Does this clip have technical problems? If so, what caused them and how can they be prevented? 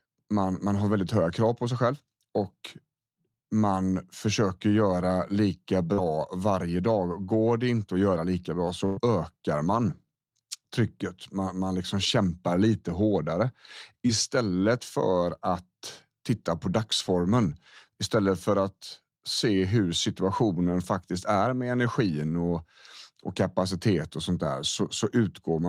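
Yes. Short concealed packet loss occurs at 5.93–5.99 s and 14.07–14.11 s. About 40 ms and 20 ms of audio failed to reach the decoder, and the receiver extrapolated the last speech sound over each hole. This leaves a brief smear before the real signal resumes. A larger jitter buffer or forward error correction would prevent it.

A burst of packet loss at 8.85–8.99 s removes about 120 ms. Concealment fills nearly all of it (117 ms) by prolonging and attenuating the preceding sound into a fading buzz or hiss, with no silence, and the speech then jumps ahead past the missing segment. Redundant packet coding or a more stable, less congested network path would prevent it.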